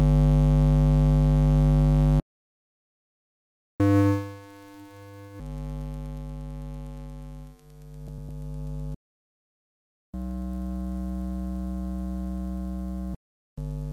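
A playback stall at 2.20 s cuts the sound mid-flow into 1.6 s of silence until 3.80 s, most likely because the player's buffer ran dry or its thread was blocked. Catch-up at higher speed follows from 3.80 to 5.40 s: the backlog is resampled at 2.0 times speed, so the audio runs fast and sounds roughly ten semitones higher before it drops back to normal.

Frames out of order from 8.08 to 8.29 s swap two neighbouring blocks of about 104.5 ms each, which fits four-frame runs decoded in the wrong sequence. The result is a brief garbled flutter, and no time is lost.

A second playback stall silences the sound from 8.94 to 10.14 s, a gap of 1.19 s. Catch-up at higher speed then runs from 10.14 to 13.14 s at 1.25 times speed, raising the pitch by around four semitones until playback settles back to normal.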